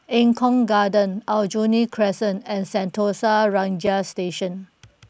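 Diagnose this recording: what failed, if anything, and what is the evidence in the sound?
A block of digital silence at 3.87 s points to a failure at the driver or buffer stage. In the speech, the signal drops out for about 4.2 ms and then resumes, with no fade on either side. That abrupt step down and back up is heard as a single tick rather than a gap, because the hole is too short to register as silence. The likely cause is that the output buffer was not filled in time, so zeros were sent in place of the missing samples.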